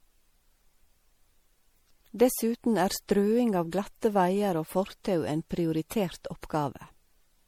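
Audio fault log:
throughout generation loss: the speech was likely passed through MP3 encoding and decoding about three times, each pass requantising on a shifted frame grid. Noise and spectral holes pile up, so it sounds swirly, smeared and hollow with blurred attacks, beyond what a single 64 kbit/s encode would give.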